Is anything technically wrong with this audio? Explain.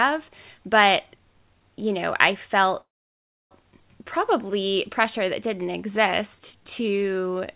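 Yes, three faults are audible in this speech.

From 2.81 to 3.52 s there is a call audio freeze. Packets were likely held up in transit and the jitter buffer ran dry, so playback stalls: a brief fading tail of the last sound, then about 0.65 s of silence. The speech resumes where it stopped, with nothing lost, only about 0.7 s of delay inserted.

At 3.80 s the audio does a skip ahead. A stretch of audio was dropped while later audio was already queued, so playback jumps forward with almost no gap. Roughly 0.4 s of speech is missing, and the two sides are spliced nearly directly.

From 4.04 s to the end at 7.55 s there is a jitter buffer slow-down. The buffer was rebuilding its reserve by repeating single pitch periods and bits of pauses, adding 270 ms in total. The speech runs at about 93% speed at unchanged pitch, with drawn-out sounds. The band limit throughout, with nothing above 4 kHz, fits a G.711 telephone-grade call path.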